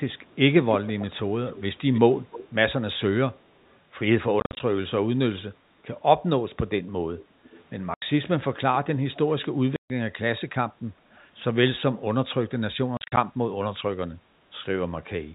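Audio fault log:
0.70–2.48 s, 3.40–3.78 s, 7.19–7.64 s, 11.15–11.20 s, echo leak: A delayed copy of the speech trails the original, about 306 ms late in the first two, then 343 ms and 379 ms. It is strongest at 0.70–2.48 s, roughly 15 dB down, and weakest at 3.40–3.78 s, near 40 dB down. The likely cause is a far-end loudspeaker whose echo canceller let some of its own playback through. On a spectrogram, the harmonic pattern repeats faintly, shifted right by that delay.
4.40–4.60 s, 7.94–8.02 s, 9.76–9.90 s, 12.97–13.17 s, packet loss filled with silence: The speech is cut by abrupt holes: 80 ms at 7.94 s and 140 ms at 9.76 s. At 4.40 s and 12.97 s, 130 ms is lost in pieces over 200 ms, with the longest pieces 50 ms and 40 ms. Those holes are lost packets replaced by silence, and the steps fit 10 ms packets. The waveform drops to a flat line with square edges, and the spectrogram shows blank vertical bars.
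10.93–11.07 s, background gated by the echo canceller: For about 150 ms the room sound dips by about 6 dB and then comes back. The echo canceller turned the microphone down while the loudspeaker played and released it afterwards. On a spectrogram, the background noise floor thins briefly across all frequencies. The waveform shows a shallow notch in the low-level noise between speech sounds. The echo scrap at 11.15 s comes just after it, within the band-limited G.711 telephone coding, which works normally.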